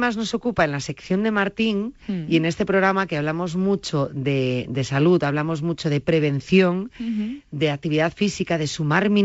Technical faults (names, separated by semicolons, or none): none